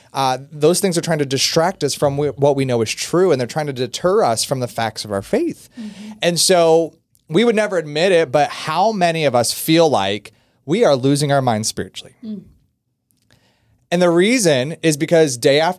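No technical faults occur anywhere in the recording, so there is nothing to describe in time order.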